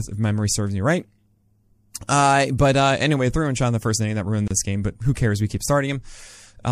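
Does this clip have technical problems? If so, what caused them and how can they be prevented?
Yes. The speech carries plainly audible watery, swirly artefacts, with smeared attacks throughout. This is likely MP3 compression, and the damage fits a low bitrate of around 64 kbps that starves the frequency lines of bits. Encoding at a higher bitrate or using a more efficient codec would prevent it.

At 4.48 to 4.51 s, there is a gap at a join of encoded pieces. Separately encoded segments were joined with their encoder delay and end padding left in, which opens a 29 ms gap with smeared edges. Trimming the delay and padding with gapless metadata, or encoding the whole recording as one piece, would prevent it.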